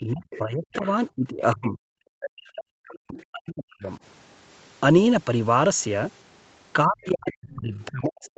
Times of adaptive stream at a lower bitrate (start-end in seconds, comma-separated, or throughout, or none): none